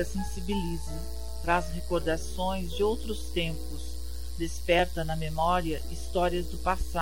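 From 1.28 s to 6.55 s, a brief click recurs about every 1.75 s, four times. These are likely clock drift buffer slips: mismatched device clocks, off by several hundred ppm, force a few dozen samples to be dropped or repeated. Unlike random dropouts, the spacing stays strictly regular.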